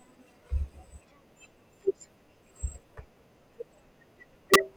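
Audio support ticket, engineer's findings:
Integer overflow at 4.54 s, speech clip. Single violent crack on a loud peak driven about 2 dB past full scale; sum wrapped to opposite sign instead of limiting. Full-range flip, far sharper than clipping's flattened peak. Suspect unsaturated gain/mix stage.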